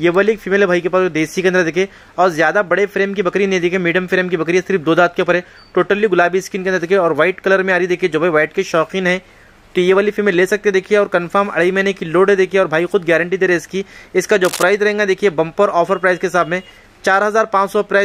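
A short burst of cable scratch noise runs from 14.45 to 14.65 s, a rough, uneven rustle roughly 10 dB below the audio, likely from a worn cable or connector being moved. A spectrogram shows it as broadband vertical smearing, and the waveform as jagged, irregular spikes.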